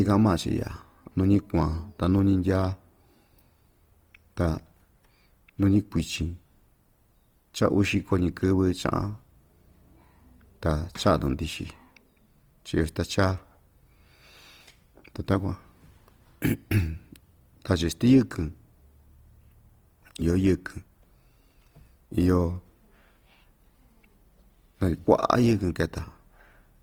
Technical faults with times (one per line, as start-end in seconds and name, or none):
0.00-26.82 Opus compression